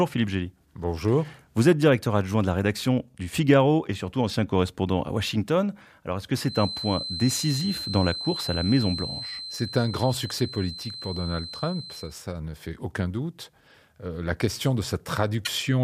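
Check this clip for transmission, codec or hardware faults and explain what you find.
One fault, near the very end of the speech. From 15.45 to 15.49 s the audio skips forward and the signal breaks up for about 40 ms. The likely cause is a broken MP3 bit reservoir. A frame was cut, so the next frame reached back for data it had stored earlier and instead decoded bytes from an unrelated frame. The glitch lasts less than two frames, which fits MP3 frames of about 24 ms.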